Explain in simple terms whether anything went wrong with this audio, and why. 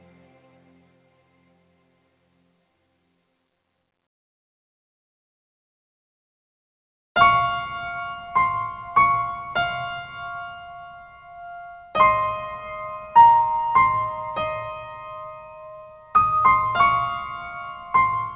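Nothing went wrong: the audio simply has the narrow, phone-like sound of a normal call, with nothing above 4 kHz, which fits a standard G.711 mu-law telephone codec doing its usual job.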